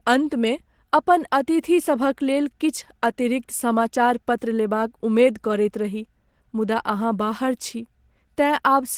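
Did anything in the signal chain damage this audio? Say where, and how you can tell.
Yes. The damage sits at the codec stage and runs through the whole clip. The speech has a muffled, hoarse, grainy quality with plainly audible coding damage, yet the spectrum is not band-limited: content reaches about 20.2 kHz, with nothing above. That pairing of full bandwidth with rough texture is the signature of Opus compression at a low rate. It likely comes from hybrid mode near 16 kbps, where a speech coder handles the lows and band energies with noise fill stand in for the highs.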